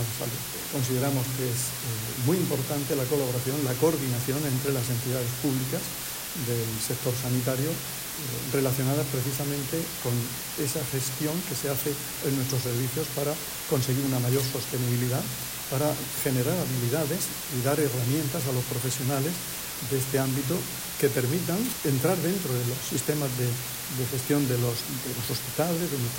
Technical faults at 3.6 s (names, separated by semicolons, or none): low bit depth with dither